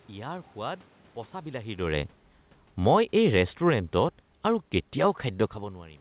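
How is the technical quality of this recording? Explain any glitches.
There's one real glitch: the automatic gain falling between 2.72 and 5.17 s. The band-limited sound, with nothing above 4 kHz, points to a narrowband call codec like G.711. The room noise and the talker's shifts in distance around 1.5 s and 5.5 s are part of the recording itself.

From 2.72 s the automatic gain control decides the input is too loud, or its background noise too strong for its gain, and eases its gain down over roughly two and a half seconds, by about 3 dB in total. Because the gain applies to everything coming in, the speech and the room noise sink together. That's what separates it from the talker moving: the background drops along with the voice.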